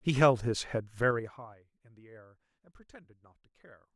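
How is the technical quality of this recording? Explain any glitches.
The recording has one clear glitch, a burst of zipper noise partway through the speech.

From 1.02 s to 1.62 s, the level is pulled down by roughly 25 dB, but the gain control moves in raw steps of about 3 dB, around ten a second, with no smoothing between them. Each jump cuts the waveform abruptly and leaves a small click, so the fade carries a rapid ticking, zipping texture until it settles.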